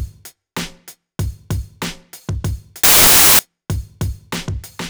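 Between 2.84 and 3.39 s the reader assembles each sample from the wrong bytes, whether shifted by one, swapped in order or misaligned, so the rapidly fluctuating low-order bits end up as the most significant part of every value. For those 0.55 s the audio is buried under loud, harsh broadband noise.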